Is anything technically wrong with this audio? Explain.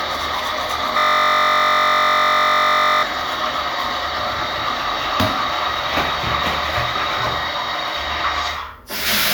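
Yes. From 0.98 s to 3.03 s the sound freezes into a steady, harsh buzz at about 47 Hz. A single 21.33 ms slice of audio repeats back-to-back roughly a hundred times. This is a system hang loop: the computer or its audio driver stalled while the sound hardware kept replaying the same ring buffer, which fits a 1024-sample buffer. The loop is so short that it fuses into a tone, and about two seconds of the real audio never arrive.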